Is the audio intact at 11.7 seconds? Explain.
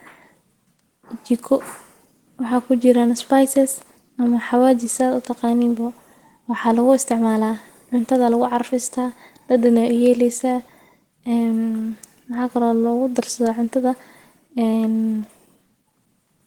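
No. At 11.7 s the speech carries Opus compression damage, present from start to finish rather than at that instant alone. The sound is hoarse and grainy, with a rough, noise-like texture on voiced parts, which points to the encoder's hybrid speech mode at a low rate, likely around 16 kbps. Starved bands are filled with noise instead of being left empty, so the audio roughens instead of swirling, while content still reaches about 20.1 kHz.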